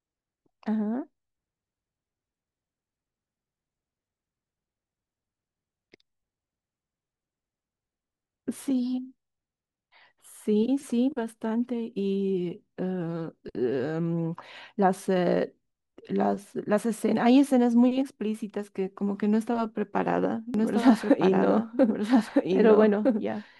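From 20.54 s to the end, a doubled audio track cuts in abruptly: a full-band copy trails about a second and a half behind at roughly equal loudness, likely from a slower capture path. A spectrogram shows identical, undecayed patterns repeating at that offset.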